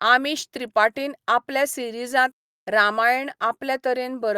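No technical faults can be heard anywhere in the speech.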